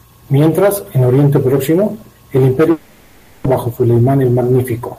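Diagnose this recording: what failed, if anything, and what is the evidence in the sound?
Network stage: from 2.71 to 3.46 s a long network dropout, likely packet loss, is concealed as a fading buzz, unlike a clean mute, and half a second of speech never returns.

Jitter buffer: from 3.54 to 4.48 s a jitter buffer speed-up runs speech about 9% fast at unchanged pitch, trimming roughly a tenth of a second, unlike resampling, which would raise pitch.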